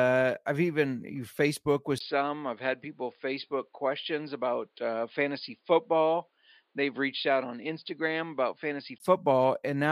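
At 1.98 s the speech drops out for about 20 ms, then comes back noticeably duller and boxier, with nothing above 5 kHz. That band limit holds until 9.00 s, when the full brightness returns. The loudness barely shifts, and a faint new background noise sits far below the speech. It sounds like an input switched to a poorer device, most likely the recording jumping to another microphone or a headset's call profile and then back.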